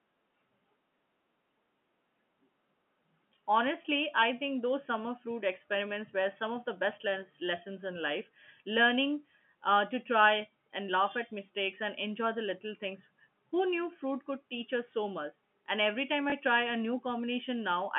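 At 16.3 s, one 20 ms packet was lost, and the receiver covered the gap by playing the previous packet again (packet loss with last packet repeated). The repeated speech probably does not line up with the pitch, and the splice gives a small blip over the band-limited G.711 telephone sound.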